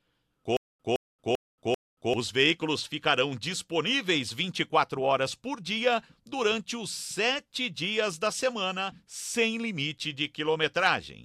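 From 0.57 to 2.14 s there is a stutter with silent gaps. A 164 ms burst repeats four times. Each is followed by 228 ms of dead silence, a steady 392 ms cycle. Likely a stalled stream replaying its last fragment. The audio meant for that span is lost.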